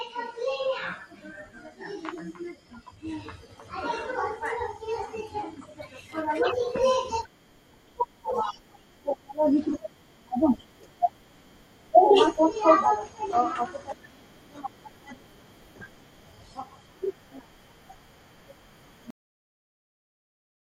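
A cut-off end hits this speech clip at 19.10 s. The final buffers never reached the output, so the sound stops mid-utterance and falls straight to digital silence without decay.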